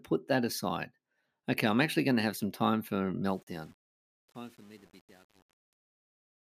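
Speech fading out after "have some time for" shows truncation distortion on a fade from 3.28 s to the end, harshest from 3.42 s: grit that worsens as level drops, unlike steady noise, fitting an undithered 8-bit stage.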